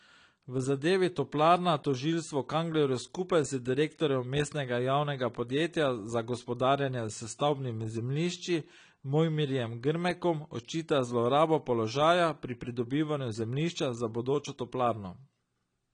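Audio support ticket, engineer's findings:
Dull, smeared speech throughout, no content above 10 kHz, warbling/fizzy texture on sibilants and sustained sounds. Likely AAC compression (AAC-LC) at low bitrate, consistent with about 32 kbps: lowered cut-off, coarse quantisation leaving spectral holes.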